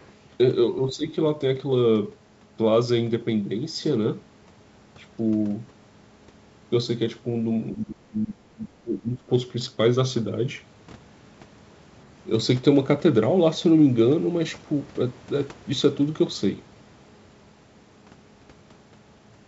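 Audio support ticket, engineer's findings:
Other side's voice leaking through, 0.00 to 0.07 s: faint second voice at the very start, sitting about 35 dB under the talker. Likely the AEC not fully cancelling far-end audio from the loudspeaker, so a short residual scrap slips into the mic feed. Very quiet and brief, but it's there.

Speech suppressed in double talk, three spots. At 0.81 to 1.07 s, the talker dips by around 10 dB, a mild duck. At 7.73 to 8.61 s and 8.83 to 9.30 s, there are deeper drops of roughly 20 dB, with the voice pulled down hard. The likely cause is the echo canceller failing to tell near-end speech from echo during overlap and attenuating both. Top end stops at 8 kHz throughout, in line with G.722 at 64 kbps.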